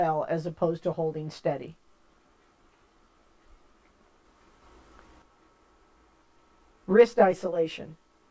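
From 1.64 to 6.68 s the resampler restarted on every block, converting 48 kHz to 16 kHz one 40 ms block at a time with no memory of neighbouring samples. Each block edge carries a small error, heard as a steady 25 Hz buzz of ticks riding on the sound.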